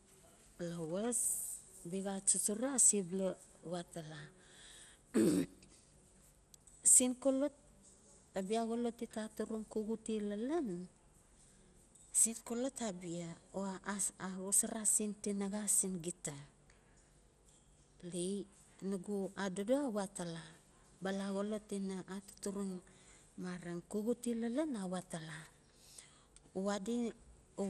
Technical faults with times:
0.00-27.70 MP2 compression

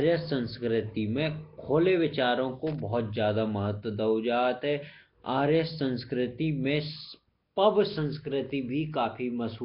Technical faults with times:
0.00-9.65 Nellymoser compression
2.67-2.80 loose connector crackle
8.46-8.50 loose connector crackle

